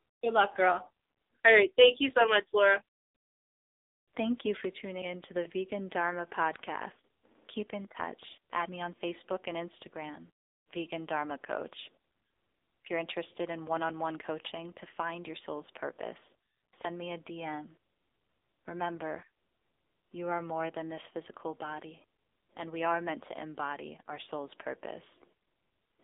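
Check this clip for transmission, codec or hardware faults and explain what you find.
There's one fault, running through the whole clip: AMR narrowband mobile codec. Nothing gets above 3.8 kHz, and the heavy buzzy, synthetic quality points to a low AMR-NB rate, around 6.7 kbps.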